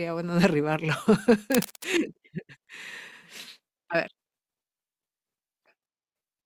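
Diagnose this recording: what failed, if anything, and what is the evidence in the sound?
The failure is in the analogue wiring: cable scratch noise runs from 1.52 to 1.85 s, a dense, ragged burst of scratching laid over the speech at roughly 10 dB below it. The likely cause is a worn cable or connector being moved, its contact resistance jumping around and injecting noise. On a spectrogram this shows as a broadband smear of irregular vertical streaks across the whole band. The waveform carries jagged, uneven spikes on top of the speech envelope for that third of a second.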